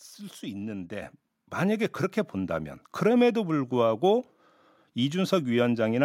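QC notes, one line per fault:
1.02 s, microphone volume stepped up: the speech and the background behind it jump louder together in a single step of about 7 dB, with no ramp. The change reads as an abrupt lift in presence and room noise at once. That combined rise points to the input gain on the capture device being raised by the call software's automatic level control, not to the talker getting louder.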